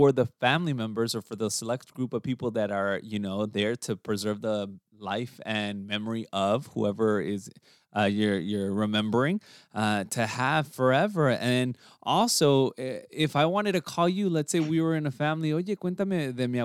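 No technical faults are audible.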